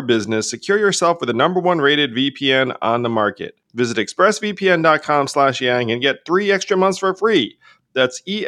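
No technical faults are audible anywhere in the speech.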